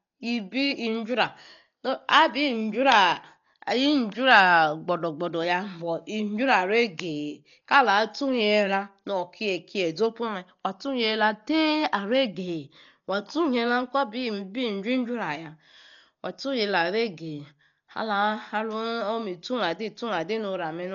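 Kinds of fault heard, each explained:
Dolby Digital compression: throughout, the speech is dull with nothing above 6.9 kHz and heavily damaged, with a rough, fluttering noise clinging to voiced sounds. This likely comes from an AC-3 style coder starved of bits, fitting about 40 kbps, which narrows the band and replaces unfunded frequency lines with dither noise.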